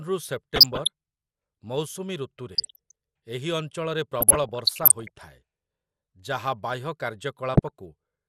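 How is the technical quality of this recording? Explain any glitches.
The recording is technically degraded: dull, granular speech throughout, plus four bursts of reception damage.

Throughout, the speech sounds dull and gurgling, with coarse granular distortion. This is likely MP2 compression at a low rate, around 80 kbps. At that rate, upper sub-bands drop out and the remaining ones are quantised roughly.

DAB burbling occurs at 0.54–0.87 s, at 2.53–2.91 s (ending just before "ଏହି ଅଞ୍ଚଳରେ"), at 4.21–5.22 s (starting just after "ଏହି ଅଞ୍ଚଳରେ"), and at 7.54–7.71 s. Bit errors at a low fraction of a percent slip past error correction, so short blips of noise appear in individual sub-bands.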